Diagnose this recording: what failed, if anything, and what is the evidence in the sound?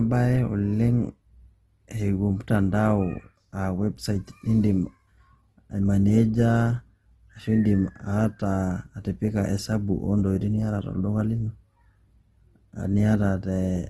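Opus compression runs through the whole speech clip, a codec-stage fault. The audio is plainly damaged: the sound is grainy and rough, and nothing is present above 12.1 kHz. That cut-off and the texture point to a likely low-bitrate Opus encode in its music mode, roughly a 16 kbps stream. With too few bits, the encoder fills thin bands with folded or noise-like content instead of leaving gaps, so the detail comes back coarse rather than swirling.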